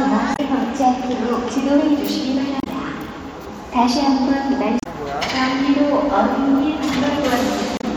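Everyday sound recording with damaged data in a compressed stream. Brief glitches of about 70 ms occur at 0.33, 2.60, 4.80 and 7.77 s, where the decoder misreads corrupted frames and loses sync.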